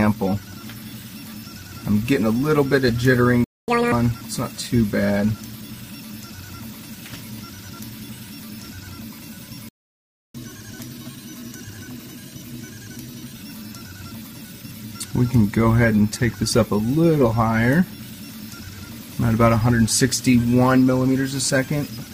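At 3.44 s the sound stops dead for about 0.24 s and resumes at 3.68 s. At 9.69 s it stops again, this time for about 0.66 s, until 10.35 s. Both are playback stalls, most likely the player running short of data or its output thread being blocked, so nothing reached the output until it recovered. Unlike a packet dropout, which cuts away a piece of the material, each stall is a plain hole in time.

Each stall is followed by catch-up at higher speed, as the player resamples its backlog to win back the lost time. From 3.68 to 3.92 s the audio runs at double speed, nearly an octave higher, a brief chipmunk-like burst. From 10.35 to 13.35 s the rate is 1.1 times normal, roughly a semitone and a half up, a gentler rush that settles back to normal. A pure pitch shift would leave the timing alone, but here tempo and pitch rise together, which marks this as speed-up rather than pitch processing.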